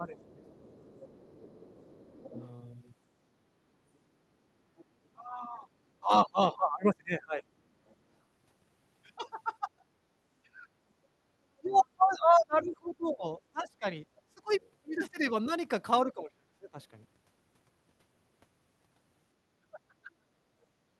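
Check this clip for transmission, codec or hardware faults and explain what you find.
Two echo-cancellation faults are present in this speech, both recurring.

Speech suppressed in double talk occurs from 0.0 to 2.05 s, where it totals roughly 0.7 s of dips as deep as about 15 dB, and again from 5.15 s to the end, where drops reach about 25 dB. The likely cause is an echo canceller attenuating the talker while both sides speak.

The other side's voice leaking through appears at about 25 dB below the speech from 0.2 to 4.85 s and from 11.77 to 16.1 s, plus a brief scrap near 40 dB down at 7.89–7.95 s. The likely cause is incomplete loudspeaker echo removal.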